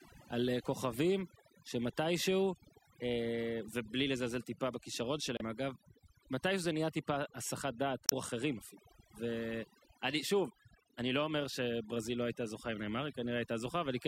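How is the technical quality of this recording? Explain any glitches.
The technical quality is compromised by two kinds of fault.

Overdone noise removal runs throughout: an over-strong denoiser mutes bands near its noise estimate, leaving twinkling specks in the background, unlike steady hiss.

Damaged data in a compressed stream causes brief glitches at 5.37 to 5.42 s and 8.06 to 8.13 s, as the decoder loses sync, unlike a clean dropout.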